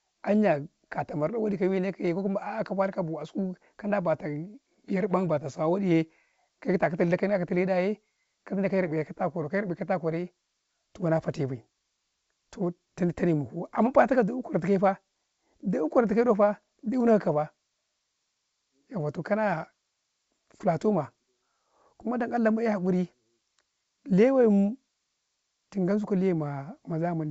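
The speech carries no technical faults, and its bandwidth reaching to about 7 kHz points to G.722 wideband telephone coding, which fits the codec's full 64 kbit/s mode, with at most faint coding traces.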